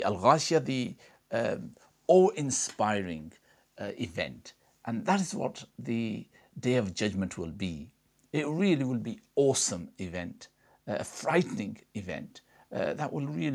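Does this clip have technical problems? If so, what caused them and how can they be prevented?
No, there's nothing here to trace back to a cause or prevent, as the speech runs without any technical fault.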